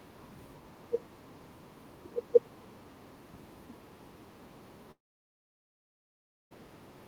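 Speech, with one fault. From 4.91 s to 6.53 s there is a long network dropout. The last sound trails off briefly. Then about 1.55 s of silence follows. Speech resumes with 1.6 s lost. Audio packets likely stopped arriving over the network.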